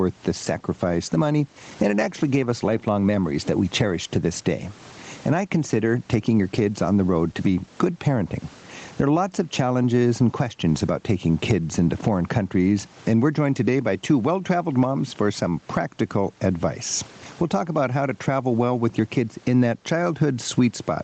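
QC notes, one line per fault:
Throughout, gain pumping. The gain swings by about 20 dB. Loud and quiet parts sit squashed together. The likely cause is input gain set too high, with a fast limiter clamping it back.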